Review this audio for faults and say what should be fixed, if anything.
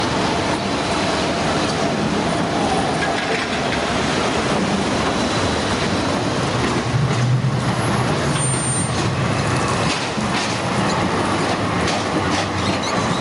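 Gain pumping throughout: the gain swings by roughly 10 dB, pulled down on each loud sound, likely a fast limiter fighting excessive input gain. To prevent it, lower the input gain and ease or slow the limiter so it stops reacting to every peak.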